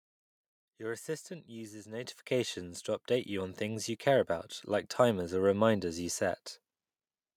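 At 2.04 s, just after "assistant uses", the call software judged the microphone too quiet and raised its input volume in a single step. This microphone volume stepped up by about 9 dB, so speech and background noise jump louder together.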